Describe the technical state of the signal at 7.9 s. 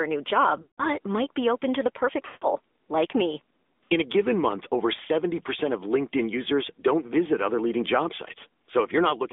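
At 7.9 s you're hearing the same AMR narrowband mobile codec damage that runs through the whole clip. The speech sits in a phone-line band of roughly 250 Hz to 3.6 kHz. The codec rebuilds the voice from a vocal-tract model fed with a handful of pulses per short subframe, so it comes out audibly buzzy and synthetic. That level of damage fits an upper AMR-NB mode of around 10 kbps.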